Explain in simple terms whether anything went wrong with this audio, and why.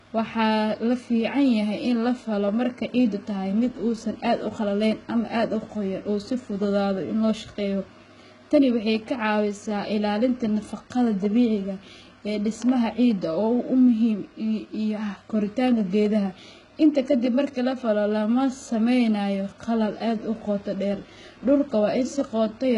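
Two things went wrong. The whole recording has heavy damage that sounds like HE-AAC compression, a squeeze-down format that is the likely cause. It keeps only the lower sounds properly and fakes the top end, so nothing real remains above 11 kHz. The s sounds come out gritty and lispy.

There is also a loud pop at 12.62 to 12.71 s, right after "nafaqada dabiciga ee". It is really two sharp pops in quick succession, louder than the speech, which carries on underneath. A sudden electrical jolt, such as a plug, a switch or static, is the likely cause.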